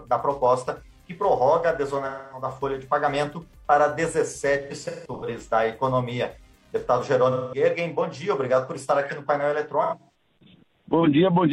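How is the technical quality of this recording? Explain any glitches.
Quality is hurt by AAC frame loss with concealment at 2.05–2.46 s, 4.62–5.28 s, 7.31–7.62 s and 9.82–10.17 s. The decoder is patching missing frames from the last good spectrum, so each gap of about 210–340 ms turns smeared and phasey. The second and fourth are scattered dropouts, with the longest runs around 150 ms and 100 ms.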